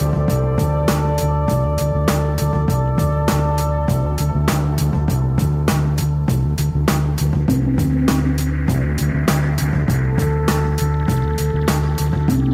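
Listening closely, nothing in the audio stood out as a technical fault.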